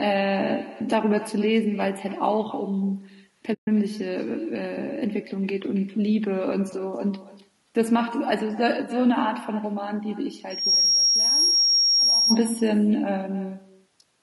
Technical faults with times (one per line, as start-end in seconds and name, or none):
0.00-14.22 echo with no canceller
0.00-14.22 low-delay AAC compression
3.53-3.68 AAC frame loss with muting
10.50-12.38 loudspeaker feedback squeal